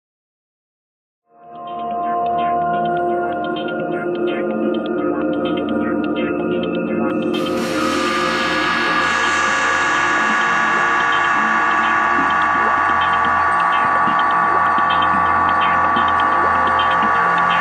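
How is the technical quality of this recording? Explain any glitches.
The technical quality is sound, with no glitches to explain, just a smooth fade-in from around 1 s that reaches full level at about 2.37 s.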